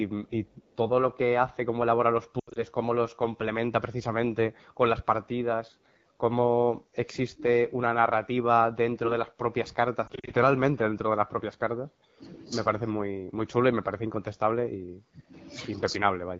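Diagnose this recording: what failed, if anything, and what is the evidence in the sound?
The codec stage is the constant one: AMR wideband (HD Voice) at what sounds like 8.85 kbit/s, so the speech stays rough and raspy the whole way through.

Lost AMR speech frames over the radio link cause brief warbles and smeared fades at 2.40 to 2.59 s and 10.07 to 10.34 s, where the decoder repeats old settings until good frames return.

In call processing, the talker dips by up to about 25 dB in patches between 6.94 and 12.23 s and again from 12.93 to 15.33 s, likely speech suppressed in double talk by the echo canceller.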